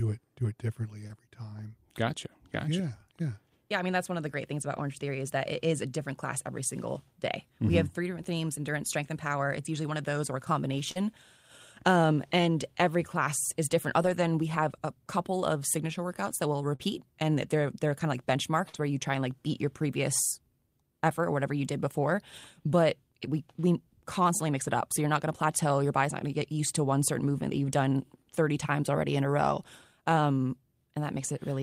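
A brief smear or wobble appears at 1.07 s, just after "it do it differently", and runs into a rough, noisy stretch up to 1.11 s. This is short concealed packet loss: about 20 ms of the speech arrived too late, so the receiver extended the preceding sound to cover the hole before blending back into real audio. The same wobble returns at 10.91 to 10.97 s, at 16.75 to 16.81 s between "signature workouts that will" and "and they're they're kind", and at 18.69 to 18.76 s, each time with about 40 ms filled in.

The tail of each of those smears turns grainy and harsher: 1.09 to 1.11 s, 10.95 to 10.97 s, 16.79 to 16.81 s and 18.74 to 18.80 s. The same texture appears alone at 4.77 s after "the great things about", across a longer 14.01 to 14.23 s stretch, and at 24.64 to 24.70 s. These are lost packets rebuilt from error correction. The following packet carried a low-bitrate copy of the missing audio, so nothing drops out, but those 20 to 120 ms come back coarser and noisier.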